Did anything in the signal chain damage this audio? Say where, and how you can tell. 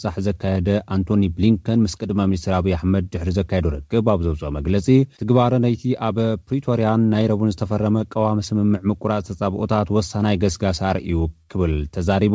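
Yes, at the network stage: a burst of packet loss from 11.42 to 11.57 s. About 70 ms of it is the receiver's concealment, with the last sound stretched into a held buzz or hiss that dies away, standing in for 60 ms of audio that never arrives, so the sound resumes abruptly further on. On a spectrogram the concealed stretch shows smeared, repeating bands fading out, and the waveform shows a decaying envelope and then a discontinuity. The band ceiling at 8 kHz throughout fits a wideband G.722 call path.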